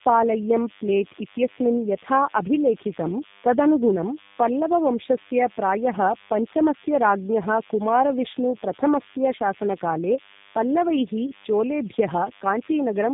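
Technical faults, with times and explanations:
Throughout, DECT cordless phone buzz: a thin, steady buzz at 100 Hz sits roughly 25 dB below the speech, from a nearby cordless handset or base whose radio burst every 10 ms is rectified in the audio circuit. A spectrogram shows evenly spaced harmonic lines at 100 Hz intervals.
Throughout, tandem speech coding: the speech passed through two G.729A coders with G.711 mu-law in between, so the second coder re-encoded already degraded audio, sounding rougher, muffled and warbly. A spectrogram shows nothing above 3.8 kHz and smeared, blotchy formants.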